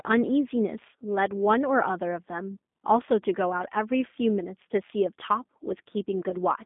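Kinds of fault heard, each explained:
G.729 codec: an 8 kbit/s speech codec confining sound to about 200 Hz–3.6 kHz and adding a plainly rough, synthetic texture, unlike clean narrowband filtering.
VoIP packet loss concealed by the speech codec: near 6.29–6.35 s, a 20 ms gap, fitting one lost packet, is filled with fading extrapolation rather than silence, unlike a dropout.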